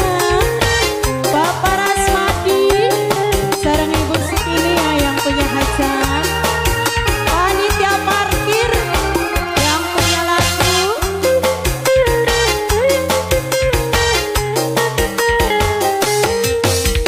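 No technical faults can be heard anywhere in the recording.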